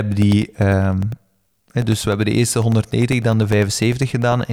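Periodic USB or driver dropouts run from 0.12 s to 4.42 s in this speech recording, with roughly a millisecond of audio replaced by silence every 0.1 s, about forty times. Something blocking the bus or driver on a fixed schedule produces these evenly spaced ticks through the speech.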